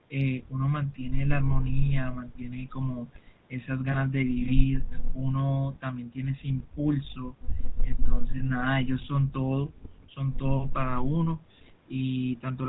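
Across the whole recording the speech carries the signature of the GSM full-rate codec. The coder rebuilds each stretch from a vocal-tract model excited by sparse, evenly spaced pulses, leaving a buzzy, gravelly grain, and its character fits the 13 kbps full-rate scheme. On a spectrogram, energy stops sharply at 4 kHz, and harmonics look smeared and coarse.

Two lost GSM frames interrupt the speech, each a single 20 ms frame, around 3.92 to 3.98 s and 8.38 to 8.41 s. In each, the decoder had nothing valid and reused the previous frame's parameters, so the sound briefly hangs on as a rough, metallic ring. A spectrogram shows a short stretch of frozen, repeated spectral pattern.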